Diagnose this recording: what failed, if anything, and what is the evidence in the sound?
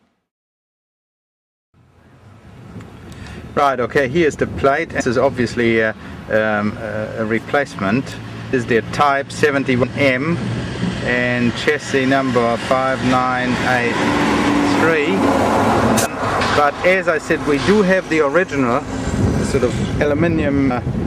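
Codec stage: compressed frames skipped. Playback jumps ahead roughly 0.15–0.4 s, leaving audible joins at 4.99, 7.04, 8.52, 9.82, 16.05 and 20.69 s.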